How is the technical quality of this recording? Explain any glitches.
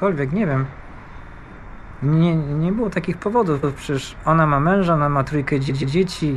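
The recording has three stutters caused by repeated frames. At 1.24–1.40 s a 52 ms block plays three extra times. At 3.62–3.75 s a 131 ms block plays once more, and at 5.68–5.95 s it plays twice more. Each repeat is compressed data written again and then decoded, heard as a stutter.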